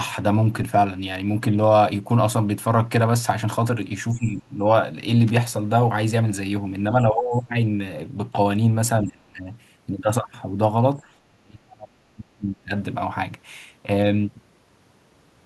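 The speech dips sharply in four places: 4.11 to 4.66 s, 7.04 to 7.34 s, 9.04 to 9.51 s and 11.29 to 12.72 s. The last is both the longest and the deepest, falling by roughly 35 dB. This is likely speech suppressed in double talk, where an echo canceller hears both sides at once and turns the near talker down along with the echo. A brief burst of scratchy crackle at 5.27 to 5.36 s is loose connector crackle, from a worn or dirty contact rapidly making and breaking and chopping the signal.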